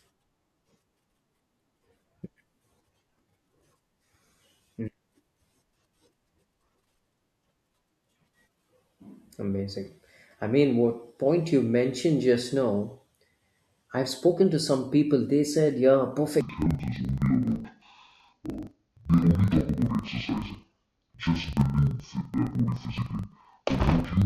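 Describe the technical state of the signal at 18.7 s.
At 18.7 s the speech sounds an octave low, doubled and choppy, with a flutter near 23.4 Hz. This is interleaved audio read as planar, from 16.41 s to the end: each block of roughly 43 ms, which fits a 2048-sample block, is split into halves that play together at half speed.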